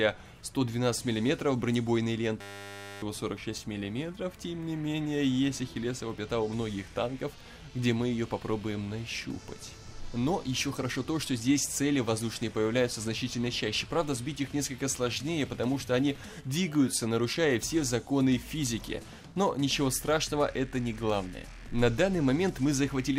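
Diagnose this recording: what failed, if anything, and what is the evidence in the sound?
The driver or buffer stage failed: the host stopped servicing the audio hardware, which kept replaying its last 10 ms ring buffer. This system hang loop runs from 2.41 to 3.02 s, repeating that one fragment at 100 Hz, about sixty times. It is heard as a steady, pitched buzz at 100 Hz rather than a stutter, because the looped piece is so short. Roughly 0.7 s of real audio never reaches the recording.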